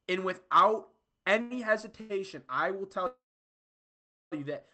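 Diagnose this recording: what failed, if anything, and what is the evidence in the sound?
Short stalls from late packets at 1.41 to 1.53 s and 2.01 to 2.21 s, the second just before "I will tell you". This is a network and jitter-buffer fault: a packet arrived late, the buffer ran dry, and the receiver stretched the last sound by about 90 ms each time before resuming without loss.

A call audio freeze from 3.07 to 4.34 s, between "I will tell" and "you that". The last sound is carried on briefly and then falls to about 1.1 s of silence before speech resumes intact. The likely cause is packets held up in the network, which emptied the jitter buffer for about 1.25 s.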